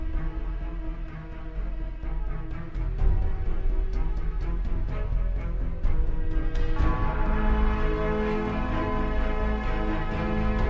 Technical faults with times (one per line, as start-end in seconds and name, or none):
0.00-10.69 wrong sample rate